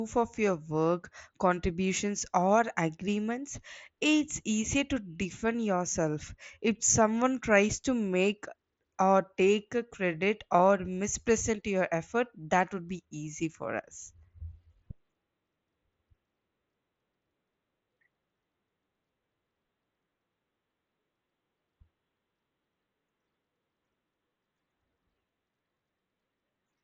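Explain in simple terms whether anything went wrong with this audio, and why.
Nothing went wrong here: this speech came through a Bluetooth headset link using the mSBC codec, which keeps everything below roughly 7.7 kHz and adds only a faint graininess, exactly what that kind of connection is built to do.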